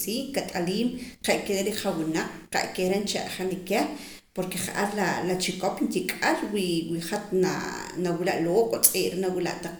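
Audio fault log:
No faults detected in the speech recording.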